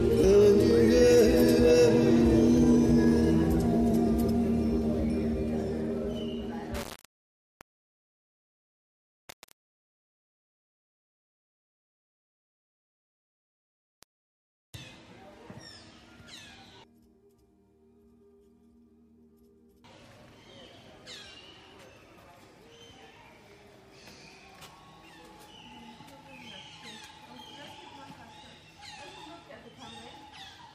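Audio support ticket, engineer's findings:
Low bit depth without dither, 6.75–14.75 s: grainy, signal-tracking distortion, quiet passages gritty. Likely 4-bit rounding without dither; error about 25 dB below signal.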